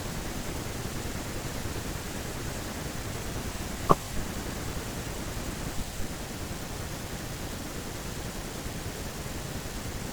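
At about 3.56 s there's a little stutter where a 50 ms slice of the speech plays twice, running to 3.61 s. That's overlapping chunks: the audio was handled in blocks, and this one kicks off 50 ms before the previous block actually finished, so the shared bit gets doubled at the join. The spacing points to blocks of around 4 s. To the ear it's a quick hiccup or click.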